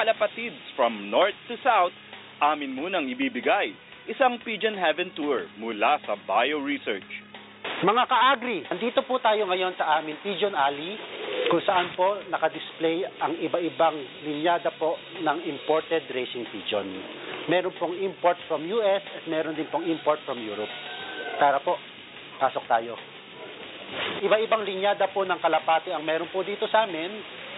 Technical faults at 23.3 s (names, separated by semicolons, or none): none